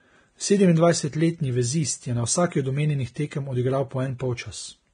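Vorbis compression runs through the whole speech clip, likely at a low bitrate near 23 kbps. Nothing remains above 9.7 kHz, and the coarsely quantised treble has become hiss of similar energy, so the sound is hissy and grainy, with roughened tones and softened consonant onsets.

Pre-echo appears at 3.14 s, just after "od omenjenih", and again at 4.18 s. Each time a sharp attack sits late in a transform block, and the block's quantisation noise spreads backwards into the quiet gap before it. This gives a brief hiss of about 19 ms and 18 ms that smears the onset.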